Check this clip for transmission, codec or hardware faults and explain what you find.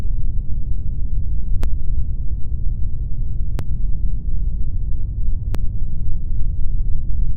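Three short skips occur, at 1.64 s, 3.59 s and 5.55 s, consistent with audio missing between chunks. The sound jumps abruptly at each point, losing a few tens of milliseconds. The regular spacing, about every 2 seconds, points to a chunk boundary, likely where the recorder closes one 2 s block and opens the next, and the two sides are butted together with no gap.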